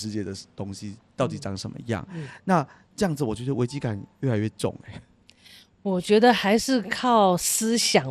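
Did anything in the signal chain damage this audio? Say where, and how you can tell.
Yes. MP2 compression damage runs throughout the speech at the codec stage: the sound is dull, with gurgling, granular distortion as upper sub-bands drop in and out and the remaining bands are coarsely quantised. This is likely a Layer II encoder starved of bits, which fits about 80 kbps.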